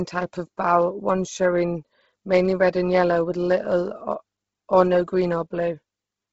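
Throughout the speech, the band stops at 7.7 kHz, and what remains has a breathy, grainy texture from heavy codec damage. The likely cause is Bluetooth LC3 compression discarding upper spectrum and filling it with noise, which fits a 16 kbps stream with 10 ms frames.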